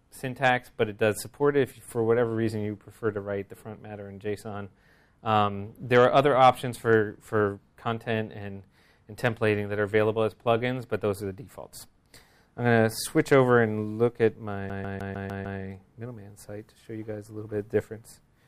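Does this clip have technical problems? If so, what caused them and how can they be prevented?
Yes. From 14.69 to 15.60 s the CD is stuck on one turn. A scratch throws the laser back a track each revolution. The same 151 ms of sound repeats six times, with a brief mute at each jump. Clean or replace the disc before playing it.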